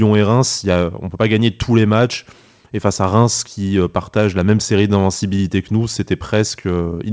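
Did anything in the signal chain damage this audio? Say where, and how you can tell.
No, nothing in the signal chain damaged this audio; the speech simply stops at 8 kHz, which fits a wideband call codec such as G.722.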